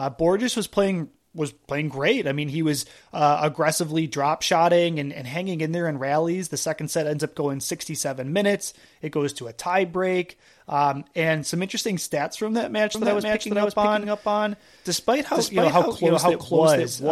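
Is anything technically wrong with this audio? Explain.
Yes. A doubled audio track starts at 12.95 s, just after "interesting stats from that", and runs to the end. A full-band copy of the speech trails about half a second behind at equal loudness. It is likely from a slower second capture path, and cuts in abruptly, without decay or room colour.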